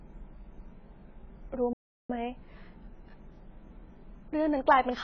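Across the whole speech clip the sound is dull and smeared, with a warbling, fizzy edge on sibilants. This is likely heavy AAC compression: the coder discards detail and lowers its cut-off, which fits AAC-LC at a very low bitrate around 16 kbps.

From 1.73 s to 2.10 s the audio drops into silence for about 362 ms, then resumes. This is likely a playback stall, with the player running short of data or its thread being blocked until output could continue.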